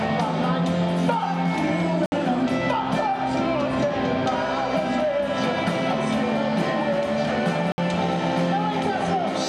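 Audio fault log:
2.06 s and 7.72 s: block of digital silence. Two separate 60 ms stretches where the output drops straight to silence and then returns with no fade, heard as a short hole, most likely a sign the output buffer was not filled in time.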